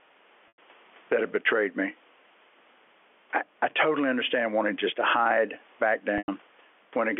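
Gain pumping runs through the whole of this speech recording. The level swings by around 10 dB, ducking under each loud syllable, squashing loud and soft parts closer together, most likely because the input gain is set far too high and a fast limiter keeps clamping it. Packet loss with pitch repetition occurs at 0.48–0.58 s and again at 6.18–6.28 s, each gap 100 ms long, which fits five 20 ms packets going missing. To bridge each gap, the receiver repeats the last pitch period, so the sound turns briefly held and buzzy, fades, and then cross-fades back in, all within the narrow band of the G.711 telephone line.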